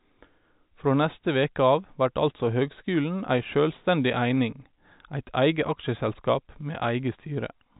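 Speech heard through an ordinary telephone-band channel, with nothing technically wrong to report.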